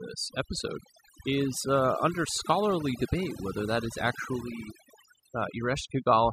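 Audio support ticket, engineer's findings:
Overdone noise removal throughout. Background dropped, leaving twinkling specks. Noise suppressor set too aggressive: bands near its noise estimate are gated down or off, taking quiet speech components with them.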